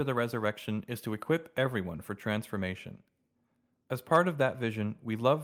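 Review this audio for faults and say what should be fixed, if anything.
No faults; nothing to fix.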